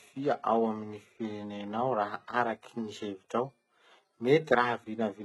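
Throughout the speech, s sounds turn gritty and lispy, likely from heavy HE-AAC compression near 16 kbps. A spectrogram shows blocky, copied treble bands above a sharp crossover.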